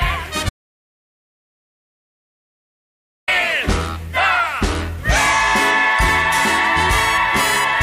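At 0.49 s the audio just drops out to silence, and it stays gone until 3.28 s, so roughly 2.8 seconds of material simply isn't there. What gives it away is how dead that gap is: no room tone, no noise floor, just silence, and the sound comes back in mid-flow rather than easing in. That pattern points to the input likely having been lost, a disconnect or stray mute, while the recorder kept writing.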